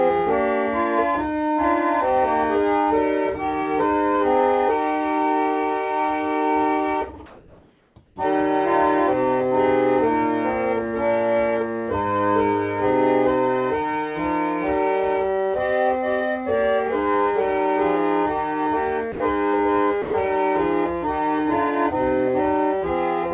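From 7.26 to 7.96 s and again at 8.06 to 8.16 s, the background turns into a steady, featureless hiss, likely comfort noise in place of the background. Unlike a dropout, only the pause is affected, with a level change of about 1 dB and then about 3 dB lower. At 19.12 to 19.2 s and 20.02 to 20.14 s, actual sound vanishes for 80 and 120 ms under that same flat noise. Here the sound was likely dropped by the voice detector, so content is lost rather than background. The call path's 4 kHz ceiling fits 64 kbps G.711 mu-law.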